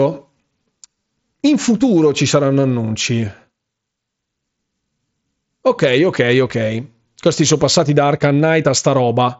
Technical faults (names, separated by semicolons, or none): none